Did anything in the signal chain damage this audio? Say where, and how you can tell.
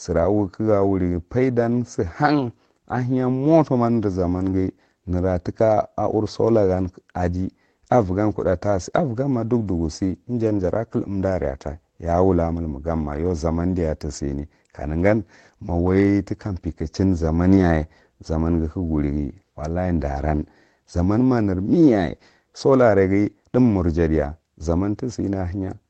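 Yes, packet loss on the network, rebuilt as lost packets recovered from error correction. At 4.35–4.49 s, 10.49–10.63 s and 17.57–17.63 s the speech turns briefly rough and noisy without a gap. The decoder played low-bitrate backup copies carried in the following packets.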